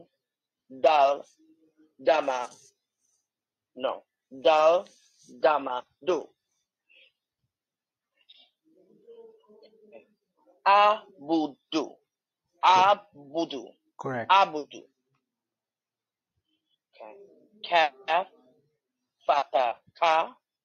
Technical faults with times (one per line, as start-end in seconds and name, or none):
none